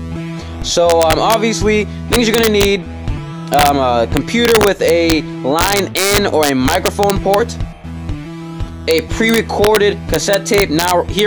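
The audio has integer overflow throughout. Loud peaks, pushed about 4 dB past the limit, wrap to the opposite sign. A small fraction of samples flip, causing sharp cracks.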